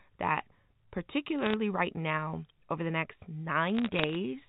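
Bit errors on a digital phone line crackle through this telephone speech at 1.39 to 1.54 s, just before "right now over the", and again at 3.68 to 4.15 s, after "now over the next". Flipped bits in the G.711 stream corrupt single samples into sharp ticks, at a rate that sounds like a fraction of a percent, over speech that is otherwise limited to 4 kHz by the phone coding.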